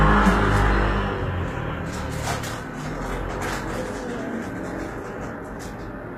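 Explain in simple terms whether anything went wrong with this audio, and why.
Yes: the whole clip has a plainly audible coded quality in the treble, likely from HE-AAC compression. The top of the spectrum has been rebuilt from copies of lower bands rather than kept, so the highs sound gritty and metallic throughout.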